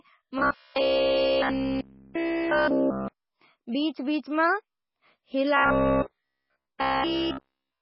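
From the start the speech sounds heavily watery and swirly, with nothing above 5.5 kHz, likely MP3 compression at a very low bitrate, around 16 kbps. From 0.39 to 3.08 s, and again from 5.57 s to the end, it turns into a rigid 66.8 Hz buzz, likely robotic sound from repeated short buffers, each roughly 15 ms long and replayed in place of nearly all the real audio.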